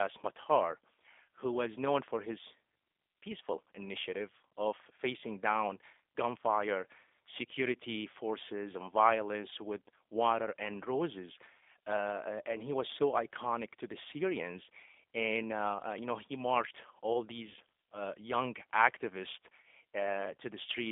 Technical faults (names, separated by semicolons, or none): G.729 codec